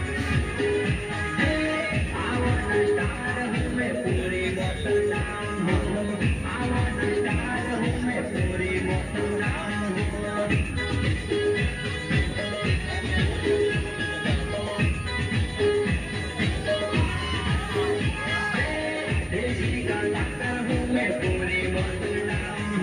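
A switching supply whistle runs through the whole clip: a thin, high tone wandering between about 9.2 and 9.3 kHz, roughly 25 dB below the sound. A switching power supply is running in an audible burst mode or beating with another one, its pitch drifting slightly as its load shifts.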